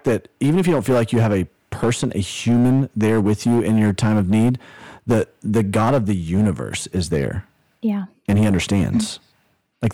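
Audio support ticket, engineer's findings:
Harsh fuzz on every loud syllable, continuous across the whole speech clip. Hard clipping. Level driven about 11 dB past full scale at a gain or converter stage, so peaks are sheared flat. Roughly 7 percent of samples were over that stage's limit. Flat tops generate high-order harmonics, heard as gritty distortion riding the louder speech.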